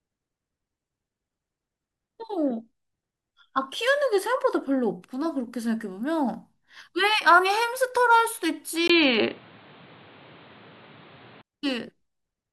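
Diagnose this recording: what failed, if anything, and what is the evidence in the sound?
Input device stage: from 8.88 s to 11.43 s the speech turns dull and boxy after a 20 ms gap, likely an input switched to a poorer device. A spectrogram shows a hard ceiling at 4.6 kHz, a new noise floor roughly 30 dB down and a level step of about 5 dB.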